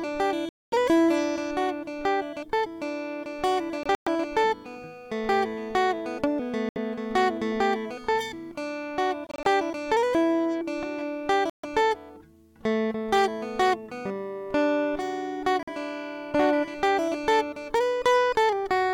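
Hard clipping runs through the whole piece of music. Peaks are driven about 5 dB past what a stage can pass. A small fraction of samples are cut flat. Those flat tops add high harmonics, heard as crackle on loud moments.

Silent gaps cut in at 0.49, 3.83, 6.69, 9.27, 11.50 and 15.63 s, lasting 46 to 232 ms. The gaps at 3.83 and 9.27 s are split into shorter holes. The music resumes further on, as if it had played on. This is likely a Bluetooth dropout, with late packets discarded.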